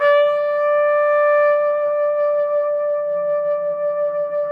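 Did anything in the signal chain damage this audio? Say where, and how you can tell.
No, nothing along the chain audibly damaged this recording of sounds, and no stage leaves a mark on the signal.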